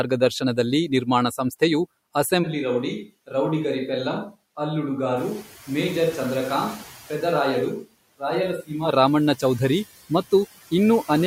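This is a speech recording with noise suppressor artifacts throughout: the processor pulls down whatever bands it judges to be steady noise by about 14 dB, frame by frame, so the background dips in the gaps and swells back under the talking. On a spectrogram this shows as a mottled, patchy noise floor that darkens between phrases and fills in beneath them, with isolated specks of leftover noise flickering in the higher bands. From 2.45 s, just before "ರಾಮಣ್ಣ ಚೌಧರಿ", to 8.87 s the sound turns roomy and hollow, with thinner bass, and then snaps back. This is a switch to a distant microphone, likely because the close microphone's signal dropped out and a farther pickup filled in. The level falls by roughly 5 dB, and room sound sits only about 30 dB under the speech. In the waveform the envelope visibly shrinks across that stretch with square edges at both ends, and the spectrogram loses low-frequency energy while reverberant smearing trails each syllable. 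Around 5 s the room noise itself jumps by about 16 dB, settling roughly 19 dB below the speech, and the noise suppressor is caught catching up. From 5.16 s to 5.45 s the noise passes through with little reduction, then sinks by about 8 dB over 290 ms as the noise estimate adapts. That shows as a bright band of broadband noise that fades over roughly a third of a second on the spectrogram.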